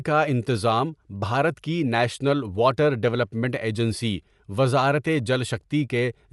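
Throughout the speech, the upper frequencies sound grainy and breathy. This is likely Bluetooth LC3 compression, which fills the upper band with noise, consistent with about 48 kbps.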